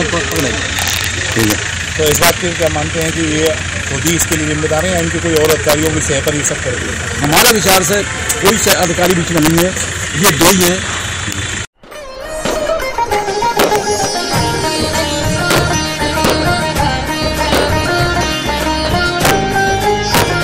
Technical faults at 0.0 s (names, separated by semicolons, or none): integer overflow